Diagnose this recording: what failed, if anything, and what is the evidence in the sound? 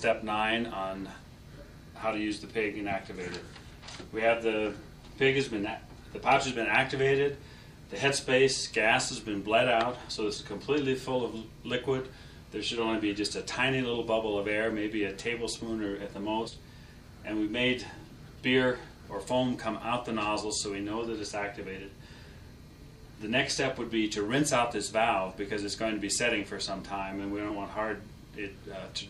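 At 16.47 s the audio lurches forward by a small amount, roughly 70 ms. This is compressed frames skipped, at the codec and storage stage. Whole frames never reach the output, either missing from the file or rejected by the decoder as corrupt. Playback resumes a frame multiple later.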